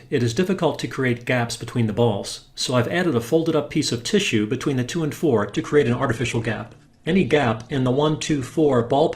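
At 5.50 s the sound drops suddenly to a lower quality and stays there to the end. This is an adaptive stream switching to a lower bitrate, most likely because the connection slowed. There is no gap at the switch. From that point codec artefacts rise, and nothing remains above about 12.1 kHz, so the treble is cut. The change fits a drop from around 64 kbit/s Opus to around 12 kbit/s.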